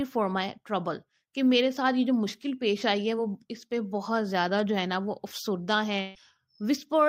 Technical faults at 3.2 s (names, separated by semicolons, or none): short concealed packet loss